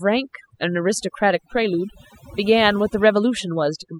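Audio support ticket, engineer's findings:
Overdone noise removal, throughout the speech clip. Background dropped, broken into twinkling specks. Noise reduction stage set too aggressive: individual frequency bands near the noise estimate pulled down or muted, taking quieter voice components with them.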